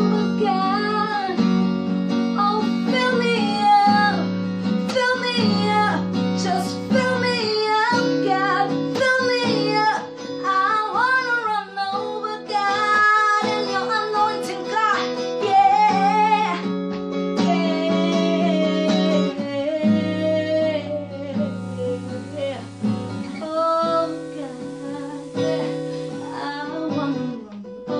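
A hybrid receiver lost its digital stream and fell back to the station's FM signal, showing digital radio blending to analogue from 21.33 s to 26.76 s. A quick 386 ms cross-fade brings in hiss roughly 30 dB down, with no level change.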